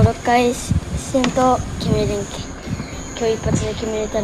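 There are no technical faults in this audio to describe.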